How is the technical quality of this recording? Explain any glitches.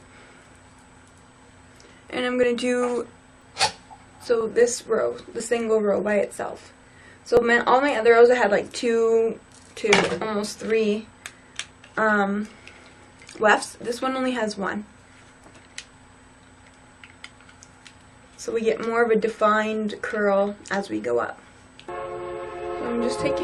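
The recording has repeated skips from overlap between stream segments at 0.45, 2.43, 3.42, 4.41, 5.40, 6.38 and 7.37 s, roughly one per second. Overlapping segment timestamps make the player discard 5 to 17 ms of sound at each boundary, so the waveform jumps in a tiny audible skip.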